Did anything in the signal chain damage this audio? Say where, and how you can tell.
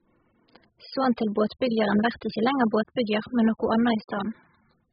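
Yes. Throughout, the speech sounds dull, smeared and warbly, with sibilants turned fizzy and nothing above 5 kHz. This points to the codec stage: AAC compression, likely AAC-LC at a very low bitrate around 8 kbps, which lowered the cut-off and starved the spectrum.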